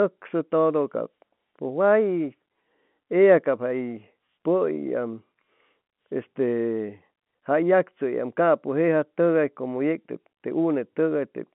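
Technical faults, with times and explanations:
No technical faults can be heard in this speech.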